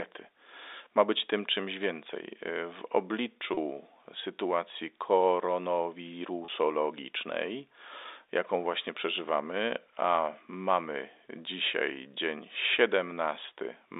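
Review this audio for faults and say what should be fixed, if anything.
Packet loss with pitch repetition occurs at 3.54 to 3.57 s and at 6.45 to 6.48 s. Each gap lasts about 30 ms, consistent with a single lost packet. The receiver filled each gap by repeating the last pitch period, so each sounds like a brief, slightly held buzz within the telephone-band sound. Adding jitter buffering or forward error correction on the network link would prevent these losses.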